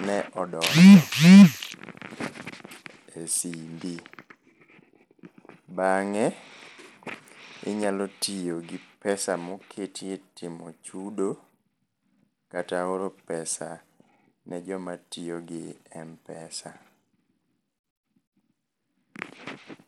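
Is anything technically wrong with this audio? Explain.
Yes. Throughout the speech there is plainly audible Bluetooth SBC compression damage, likely from a starved bit pool that fits roughly 96 kbps. The top sub-bands get few bits, so treble flickers in and out over gritty, aliased noise, unlike the swirly, watery smearing of low-bitrate MP3.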